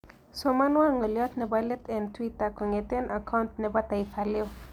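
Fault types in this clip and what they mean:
No faults turn up anywhere in this one, so there's nothing here to list.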